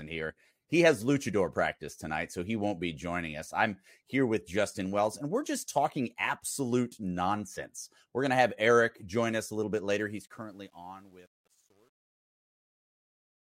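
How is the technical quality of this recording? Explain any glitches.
The recording has one glitch, in the closing fade. From 10.02 s to 13.41 s, after "us a little bit", the fade-out has truncation distortion. The fade stage keeps too few bits and adds no dither, which fits a 10-bit path. The decaying waveform collapses into coarse steps and turns gritty, worst from 10.76 s to the end.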